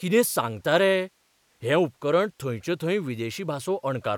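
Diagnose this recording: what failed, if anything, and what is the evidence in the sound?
Nothing failed, and the sound gives no evidence of a fault at any stage of the recording chain.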